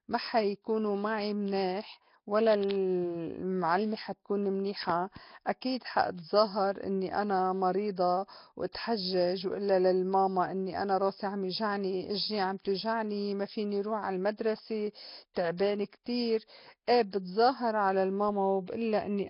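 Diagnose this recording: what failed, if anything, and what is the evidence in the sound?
Nellymoser compression runs throughout the speech, a fault at the codec stage. Nothing survives above 5.3 kHz, and heavy damage leaves a rough, hissy halo and smeared, underwater quality, which fits Nellymoser Asao at about 22 kbps. The likely cause is weak bands receiving no bits and being noise-filled.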